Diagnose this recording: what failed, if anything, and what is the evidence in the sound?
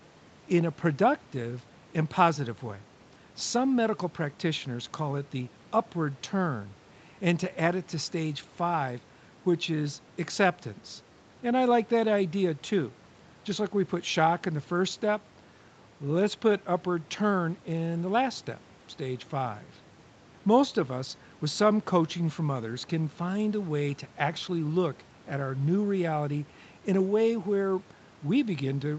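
Nothing failed; the speech shows no audible faults.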